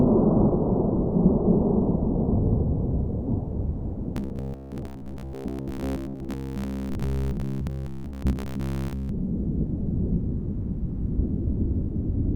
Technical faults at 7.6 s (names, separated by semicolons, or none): robotic sound from repeated short buffers